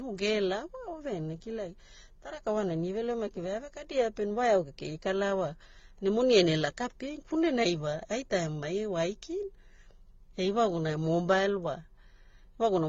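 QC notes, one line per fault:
throughout: transcoding between lossy codecs. The speech has nothing above 7.3 kHz, and the artefacts of the different codecs are heard together. This is likely a low-rate AAC-LC encode re-encoded as HE-AAC.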